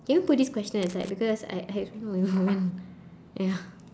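From 0.83 to 1.10 s, a loose connector crackle breaks into the speech. A worn contact makes and breaks, chopping the signal into irregular scratchy bursts. At 1.30 s comes a bit error spike. A few flipped-bit samples jump and return, giving one sharp, broadband tick at about -38 dBFS.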